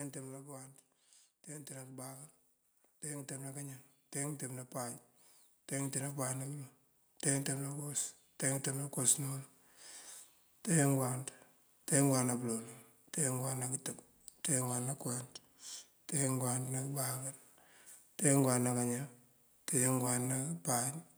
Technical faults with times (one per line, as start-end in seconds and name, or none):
1.47-9.47 automatic gain rising